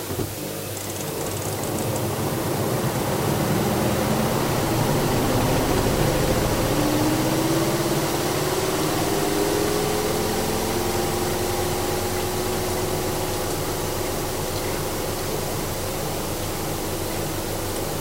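The samples were quantised to a very short word length, with dither added before rounding, and this holds for the whole recording of sounds. The resulting fault, low bit depth with dither, turns the rounding error into steady white noise rather than distortion. The hiss is constant and even from start to finish, sitting only around ten decibels below the sounds themselves, which fits roughly a 5-bit word length.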